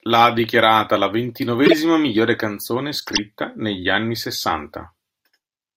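At 1.65 to 1.73 s, right after "la ha dichiarata la", a corrupt frame decoded gives a loud chirp or burst of noise. Again at 3.00 to 3.19 s, after "miglior canzone", damaged bits throw misplaced energy across several frames, a quieter chirp or burst of noise.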